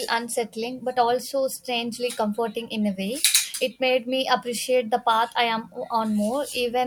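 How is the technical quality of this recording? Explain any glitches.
No glitches turn up in this speech recording. There are no dropouts, clicks or other interruptions anywhere in it.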